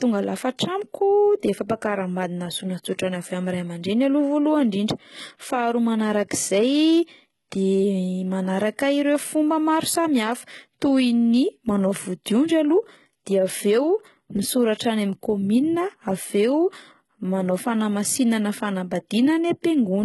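All the way through the speech there's heavy HE-AAC compression damage, likely from a very low-rate encode; it sounds like around 16 kbps. The treble is rebuilt by copying lower bands upward, so s sounds come out gritty and metallic, and nothing reaches above 11.8 kHz.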